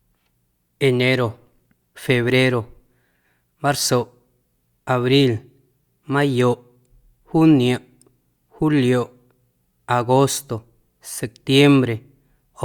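Nothing in this recording stands out as a technical fault at any point, so there's nothing here to walk through.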